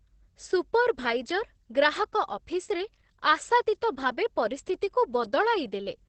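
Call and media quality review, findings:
Opus voice compression, whole clip: SILK-mode coder starved of bits, sound points to roughly 10 kbps, wideband only. Nothing above 8.4 kHz; coarse excitation coding leaves speech muffled, hoarse and faintly robotic, heavy codec damage throughout.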